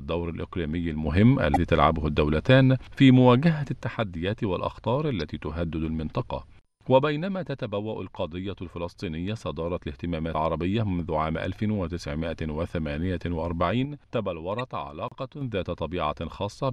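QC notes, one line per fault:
1.06–3.82 s, sudden gain jump. The level rises by about 6 dB in a single step and holds until 3.82 s, where it drops straight back. Sound and background noise rise and fall together. The change is likely a digital gain applied without a ramp, so each edge is abrupt.
13.85–15.41 s, sudden gain jump. The level drops by about 6 dB at once, then returns abruptly at 15.41 s. The likely cause is again an unramped gain step, so foreground and noise floor move as one.
1.53 s, 5.20 s, 10.31 s, 14.59 s, damaged data in a compressed stream. Each is a brief chirp or blip lasting roughly 20 to 45 ms. Corrupted bytes make the decoder misread the affected frames. It then loses sync and hunts for the next frame header.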